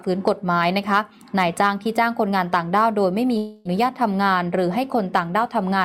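From 3.37 to 3.67 s the sound gives way to a fading buzzy continuation of itself, with no silence, then resumes with about 0.28 s skipped, most likely a long network dropout. Unlike a brief glitch or clean mute, the gap is synthesized filler and the lost material never returns.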